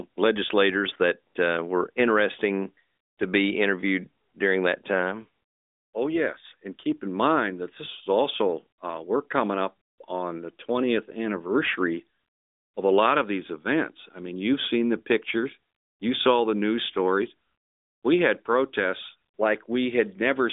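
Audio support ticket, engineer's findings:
No fault found; speech carried over a normal narrowband mobile path at 12.2 kbps, content stopping around 3.8 kHz with light codec texture, consistent with the expected line.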